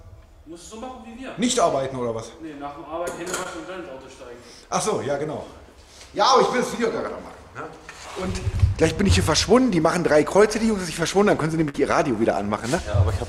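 At 3.43 to 3.47 s there is a short concealed packet loss. Roughly 20 ms of the stream failed to reach the decoder in time, and the receiver covered the hole by extending the preceding sound for about 15 ms before crossfading back into the real signal. The result is a brief smear with a wobble in the texture, and whatever fell inside that gap is absent.

A burst of packet loss follows at 11.69 to 11.76 s. About 40 ms of audio went missing in a row, and concealment filled 49 ms by continuing the last sound while lowering its level, which is heard as a held, fading tail rather than a clean continuation. Playback then resumes slightly further along, with about 7 ms of material dropped outright, so the sound jumps forward.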